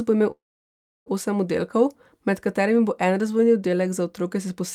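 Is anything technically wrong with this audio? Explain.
Yes. From 0.31 to 1.08 s, after "bo imel", a call audio freeze: the sound decays into about 0.7 s of silence, likely a jitter-buffer underrun, then resumes intact at "osem oddelkov med katerimi".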